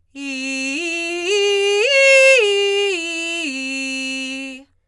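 From start to finish the music sounds dull and grainy, with a rough, fluttering haze hanging around sustained tones. This is most likely Dolby Digital compression at a starved bitrate, consistent with something near 64 kbps: the encoder has cut the band off at 11.6 kHz and left many frequency lines without real detail, so dither noise fills them. On a spectrogram the content stops flat at 11.6 kHz, with speckled, blotchy noise between harmonics.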